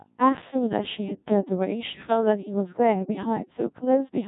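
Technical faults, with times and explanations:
Throughout, Codec 2 vocoder: the speech was reduced to pitch, voicing and envelope, fitting about 1.6 kbit/s, then rebuilt from sine waves, so it sounds heavily robotic and buzzy, with nothing above 3.8 kHz.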